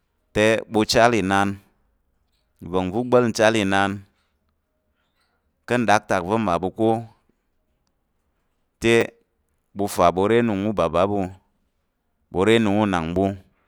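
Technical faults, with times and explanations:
9.01 s, repeated buffer: fresh audio missed its deadline, so the device replayed its last block once more, which fits a 10 ms buffer. The doubled slice is too brief to register as a stutter. Its hard joins produce a click or brief buzz, and roughly 10 ms of speech is skipped.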